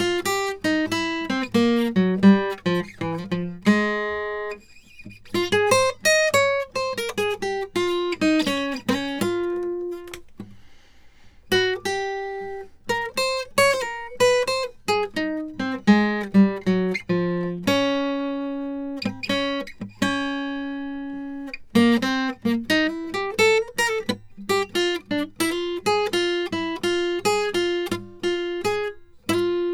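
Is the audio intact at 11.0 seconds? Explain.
Yes, at 11.0 seconds the music plays through intact, with no dropout, click, distortion or other fault at that moment.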